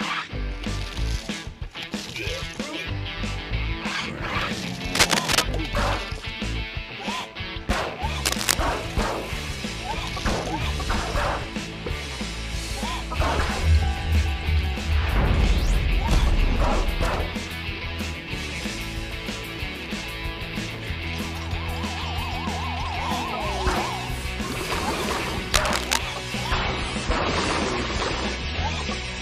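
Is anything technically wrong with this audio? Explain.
Yes, there are two problems. At 4.95 to 5.43 s, 8.22 to 8.55 s and 25.54 to 26.02 s, brief patches of dense, uneven scratching sit on top of the sound, about as loud as the audio itself and a touch louder in the first one. That's likely cable scratch noise from a worn cable or connector shifting, which makes its contact resistance jump around.

Then from 26.53 s to the end, quality suddenly drops with no gap. Everything above 10.3 kHz disappears, the top end sounds duller and more artificial, and codec artefacts creep in. That's an adaptive stream at a lower bitrate, and it sounds like a step down from roughly 128 kbit/s MP3 to about 32 kbit/s.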